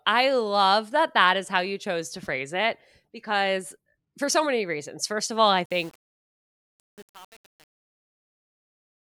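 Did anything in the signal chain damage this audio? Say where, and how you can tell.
Yes. Truncation distortion on the fade-out appears at the sample-format conversion or gain stage, from 5.65 s, just after "of all I", to the end at 9.17 s. The tail of the fade turns gritty. The stage keeps too few bits and adds no dither, which fits a 7-bit word. Near the smallest step the waveform collapses into coarse square steps.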